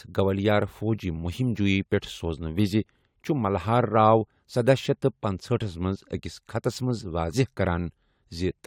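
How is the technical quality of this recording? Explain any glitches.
One glitch occurs in the speech. At 7.33 s, damaged data in a compressed stream makes the decoder lose frame sync, giving a brief glitch, seen as a thin vertical smear with a waveform discontinuity.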